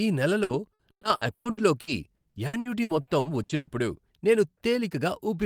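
From 0.43 to 3.70 s the speech suffers repeated packet loss, giving that robotic sound. Around sixteen short dropouts, the longest 120 ms, are each papered over by stretching the previous sound, so roughly a third of the stretch comes out choppy.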